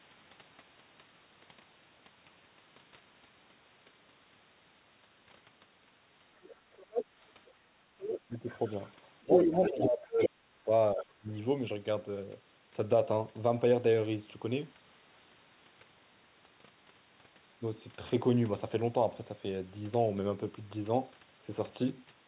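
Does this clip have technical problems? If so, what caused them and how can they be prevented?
Yes, there are two related problems.

You can hear the other side's voice leaking through at 6.43–7.14 s (about 5 dB under the talker), 7.99–8.9 s (about 10 dB under), and 9.32–9.84 s and 10.19–10.29 s, where it's roughly as loud as the talker. That's likely the far end playing from a loudspeaker back into the mic, with the echo canceller not fully removing it. A headset, or lower speaker volume with better echo-canceller tuning, would prevent it.

There's also speech suppressed in double talk. The talker dips by about 10 dB at 8.28–8.48 s, then drops much harder, up to about 30 dB, across 9.23–11.3 s, with around 1.5 s of that affected. Both sides are likely talking, and the canceller, unable to separate them, ducks everything. A headset removes the echo it's fighting, and a canceller with better double-talk detection would hold the near voice up. 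Across the whole clip the audio is narrowband, with nothing above 4 kHz, consistent with the G.711 A-law call path.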